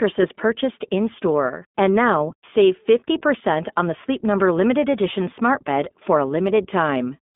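From start to end the speech carries the iLBC codec's narrowband sound: nothing reaches above 4 kHz, the line band sits near 200 Hz to 3.5 kHz, and each 20 ms frame is coded on its own. The result is a plainly rough, synthetic texture. A spectrogram shows an empty region above the cut-off.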